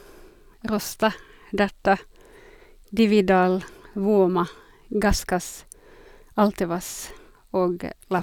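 Speech, with nothing technically wrong to point to anywhere in the clip.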